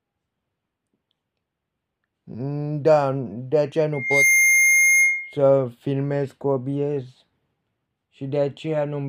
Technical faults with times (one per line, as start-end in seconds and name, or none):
3.93-5.38 loudspeaker feedback squeal